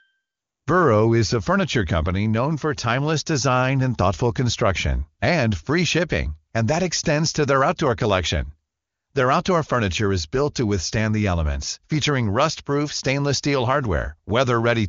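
Nothing stood out on listening to this speech clip, which comes through the AMR wideband (HD Voice) codec.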